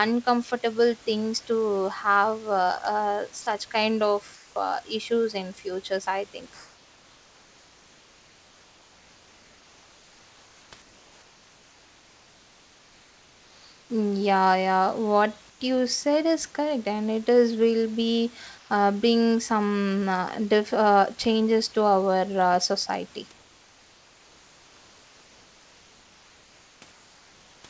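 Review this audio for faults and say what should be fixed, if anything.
At 3.42 to 3.46 s there's a sound dropped by the voice detector: about 30 ms of speech vanishes into flat noise for 40 ms. The likely cause is the sender's detector mistaking a soft bit of speech for background and pausing transmission. Loosening the detector's threshold or adding hangover time would keep those soft edges.

Comfort noise in place of the background shows up at 4.34–4.56 s, 6.54–10.72 s (right after "issues in futures i"), 10.82–13.90 s, 15.50–15.60 s (just before "you said is correct"), 18.58–18.70 s (just before "uh bring some uh"), 23.32–26.82 s and 26.92–27.64 s. In each pause the real room background, sitting roughly 31 to 33 dB below the loud parts, turns into a smooth, featureless hiss about 1 to 3 dB quieter. This is likely discontinuous transmission, with the receiver synthesising the filler noise. 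Turning off DTX, or improving the comfort-noise level and spectrum updates, would keep those pauses sounding like the actual room.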